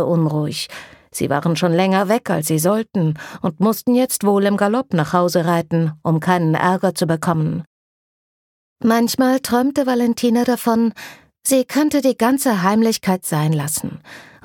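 No technical faults can be heard in this audio.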